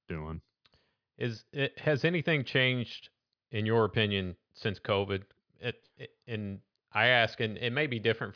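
No technical faults are audible.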